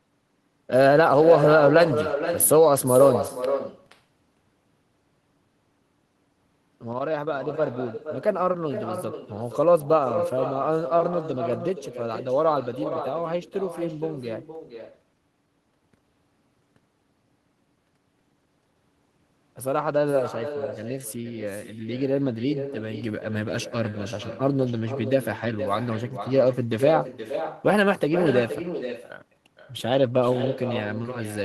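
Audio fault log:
throughout, echo with no canceller: every phrase is followed about half a second later by a quieter, thinner copy sitting about 9 dB below the direct speech, as the far end's loudspeaker feeds its microphone and the returning signal is never removed.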